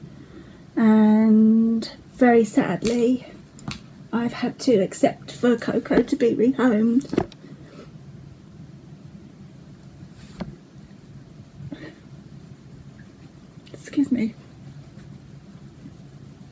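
No technical faults can be heard anywhere in this audio.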